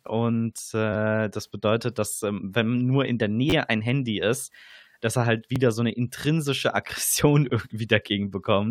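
Two short stutters interrupt this speech: a brief buzz from 3.50 to 3.53 s after "wenn nur in der", and a click at 5.56 s between "ist dass er halt" and "so 'ne intrinsische". Both are a repeated buffer. New audio arrived late, so the same 10.67 ms slice was replayed with hard joins, three extra times at the first spot and once at the second. That slice length fits a 512-sample buffer.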